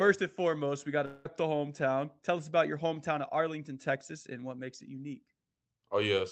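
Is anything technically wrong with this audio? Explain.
Yes. From 1.05 to 1.27 s, between "and foremost we got" and "the hometown", there is what is likely a long network dropout. About 0.2 s of speech is missing, and the gap is filled with a synthetic buzz that continues and fades the preceding sound. Speech resumes without the lost part, still band-limited to about 8 kHz by the Opus call path.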